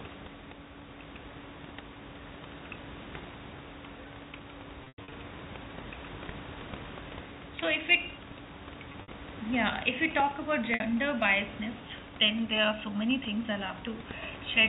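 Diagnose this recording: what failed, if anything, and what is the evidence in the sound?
Brief held, buzzy stretches of sound interrupt the speech at 4.84–5.12 s, 8.92–9.08 s and 10.74–10.80 s. The longest gap runs about 100 ms and fades toward silence before a cross-fade. This is packet loss with pitch repetition at the network stage, where the receiver repeats the last pitch period across missing packets.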